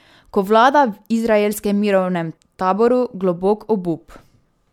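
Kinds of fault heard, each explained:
Nothing here to flag: the speech comes across without any technical fault worth pointing out.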